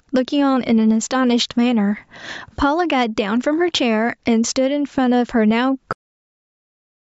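Gain pumping runs through the whole speech clip. The gain swings by around 10 dB. The likely cause is input gain set far too high, with a fast limiter pulling it down. The speech sounds squashed and flat.

At 5.93 s there is a cut-off end. The speech stops mid-sound and drops straight to digital silence, with no natural decay. It stays silent to the end. The final buffers were never written or played out, so the audio simply ends there.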